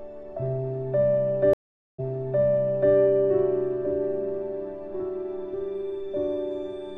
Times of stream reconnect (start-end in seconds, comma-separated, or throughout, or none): 1.53-2.94